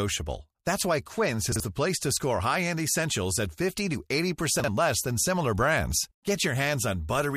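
At 1.52 to 1.60 s and 4.60 to 4.68 s, chunks out of order: one 40 ms chunk plays a chunk late. Each moment sounds jumbled. The second comes just before "less than similar brands".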